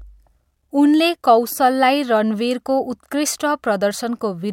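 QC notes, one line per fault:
No faults heard anywhere in the speech.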